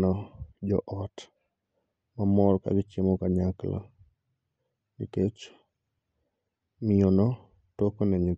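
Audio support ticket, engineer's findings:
No faults found; no issues to report.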